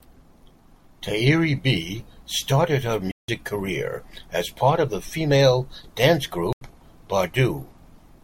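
At 3.08 s the speech drops into dead silence until 3.36 s, and again from 6.53 to 6.70 s: two cases of corrupt frame muted. Damaged compressed frames were rejected by the decoder, and the player filled their slots with silence, so each gap spans several frame lengths and the timing around it holds. On a waveform each appears as an abrupt flat line; a spectrogram shows a clean vertical band with no energy at any frequency.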